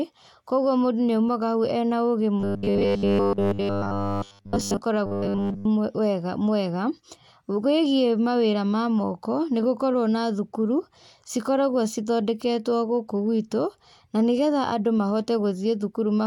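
From 2.4 to 4.81 s, and again from 5.06 to 5.65 s, the speech goes robotic: a rigid 100 Hz metallic buzz, with essentially all of it being a repeated short buffer. That's likely a 10 ms chunk looping while real audio was starved.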